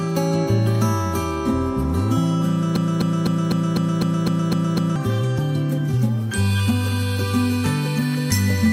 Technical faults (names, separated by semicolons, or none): broken-record loop